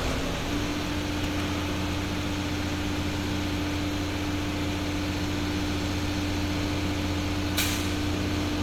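No technical faults can be heard in this recording.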